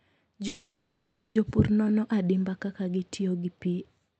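From 0.47 to 1.37 s, delayed packets likely drained the jitter buffer, causing a call audio freeze. The last sound is held as a fading buzz or hiss, and nothing is lost.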